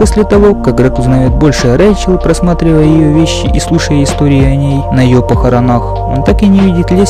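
The audio has hard clipping throughout: it's pushed about 8 dB past full scale, so roughly seven percent of samples get sliced flat, giving harsh fuzz on loud moments.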